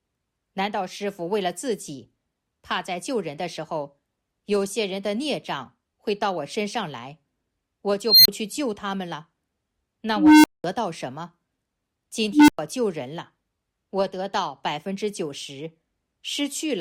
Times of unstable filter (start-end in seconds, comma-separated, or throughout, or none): 8.06-8.28, 10.16-10.64, 12.32-12.59